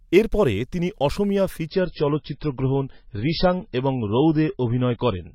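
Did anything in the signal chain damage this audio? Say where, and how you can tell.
Yes. At the network and codec stage, the adaptive stream switches to a lower bitrate at 1.66 s, right after "এর পরে তিনি অসমীয়া", and stays there to the end. Nothing above 5.6 kHz remains, and the change is abrupt without a gap, which fits a step down from roughly 128 kbit/s MP3 to a much thinner encoding.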